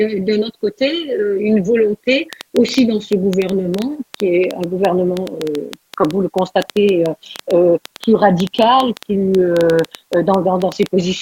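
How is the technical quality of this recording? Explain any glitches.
The recording has one clear fault. From 2.33 s to the end, a train of clicks ticks through the sound at about 6.5 per second, unevenly spaced, peaking roughly 10 dB above the signal. It is likely interference pulses, and their uniform shape separates them from random crackle.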